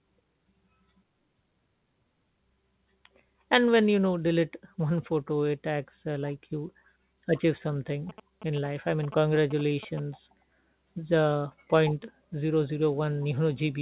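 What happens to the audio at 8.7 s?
GSM signalling bursts break in at that moment, running from 8.09 s to about 10.0 s, right after "achieve something". A nearby 2G phone sending short radio bursts is rectified by the audio circuitry, giving a galloping dit-dit-dit of short buzzes at about 217 Hz, roughly 15 dB below the speech. On a spectrogram it shows as clustered vertical stripes with a harmonic comb spaced 217 Hz apart, stopping at the call path's 4 kHz ceiling. The waveform carries regular spiky pulse trains.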